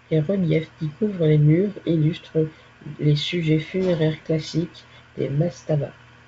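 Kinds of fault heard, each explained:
Nothing stood out on listening to this speech.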